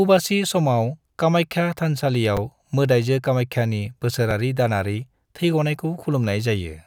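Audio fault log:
2.37 s and 4.31 s, repeated buffer: a 5.33 ms slice, which fits a 256-sample buffer, replays when fresh audio arrives late, twice extra just before "मोदाइजो कामाख्यानि" and once right after it. The tiny hard-joined loops sound like brief clicks or buzzes, with essentially nothing missing.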